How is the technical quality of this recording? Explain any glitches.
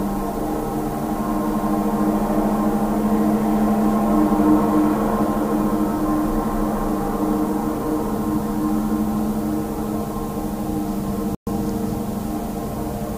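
There's one glitch worth flagging: a playback stall at 11.35 s, where the sound just drops out for about 120 ms and then carries on. That's likely the player running dry or its thread getting blocked briefly, so output goes silent until it catches up.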